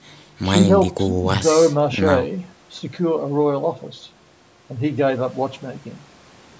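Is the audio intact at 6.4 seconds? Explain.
Yes, the speech at 6.4 seconds is intact, with only the expected band limit of the call microphone processing, which leaves nothing above 8 kHz and trims the lowest bass.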